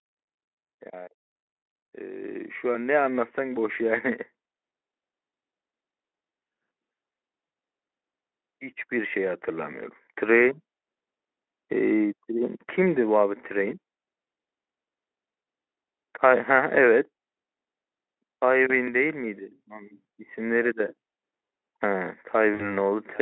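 From 1.97 to 4.16 s the automatic gain rises by about 9 dB, with voice and background swelling together over roughly two seconds. This is the control stepping up its gain after judging the input too quiet. The gradual, two-second climb that lifts the noise floor along with the speech sets it apart from a speaker simply talking louder or moving closer.

At 7.47 to 7.53 s, 15.41 to 15.43 s and 22.53 to 22.72 s, there is VoIP packet loss concealed by the speech codec. Lost stretches of 60 ms, 20 ms and 60 ms are filled by the decoder extending the last pitch and filter, so the sound smears into a buzzy tone or coloured noise that fades. At 22.53 s the weakened sound lingers past the gap as later frames rebuild. A clean dropout would give silence or a click instead.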